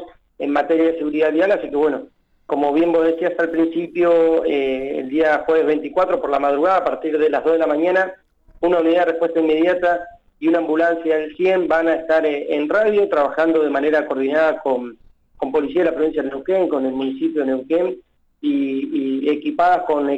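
Nothing goes wrong anywhere in this audio, so there's no technical fault to point to at any moment.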